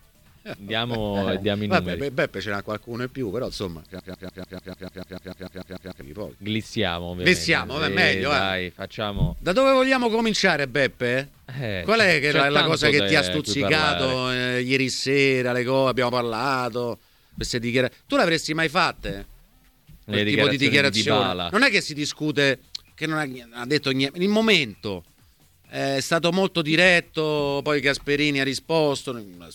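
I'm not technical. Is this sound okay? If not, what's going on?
No. From 3.99 to 6.01 s, a tiny slice of sound about 0.15 s long repeats 14 times in a row, like a stuck record. This broken-record loop likely happened because the player or stream stalled and kept replaying its last fragment, so the sound meant for those two seconds is missing.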